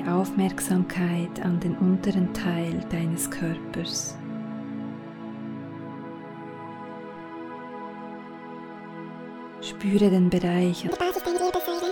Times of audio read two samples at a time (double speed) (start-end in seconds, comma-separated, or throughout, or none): 10.89-11.91